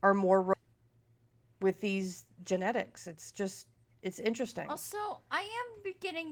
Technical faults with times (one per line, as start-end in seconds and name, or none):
0.53-0.55 skip ahead
3.07-4.71 jitter buffer speed-up